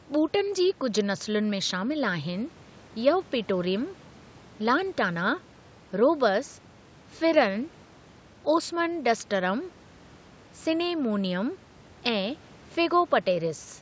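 A speech recording with no technical faults to report. It has passed through a call's microphone processing, which trims away the lowest bass as intended and leaves nothing above 8 kHz.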